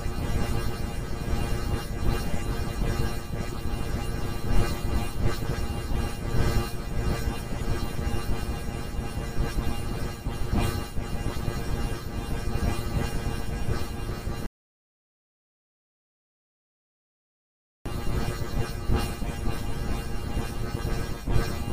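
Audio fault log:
14.46 to 17.86 s, audio dropout to silence: the sound stops dead mid-flow and the next 3.4 s or so is pure silence, with no room tone or hiss underneath. Then it snaps straight back in. That flat-black gap is the giveaway. The input was most likely lost for a moment, through a dropped connection or a brief mute, while the recorder kept writing silence. Whatever was happening in that stretch is simply gone.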